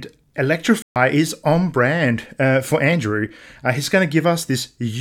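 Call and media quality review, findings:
Speech cuts to silence 0.82–0.96 s (about 140 ms), resumes at "is on brand uh". Playback stall, likely player buffer underrun or blocked audio thread.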